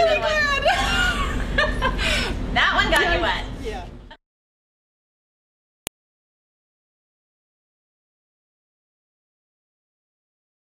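At 2.96 s there is a sharp, loud click. Another follows at 5.87 s. Each is a file header played as audio. The clip was built from separate WAV pieces joined end to end, and each piece kept its header. Those few dozen bytes of file information were read as sample values. The result is a brief snap that cuts through regardless of the surrounding sound. Each one marks where a new piece begins.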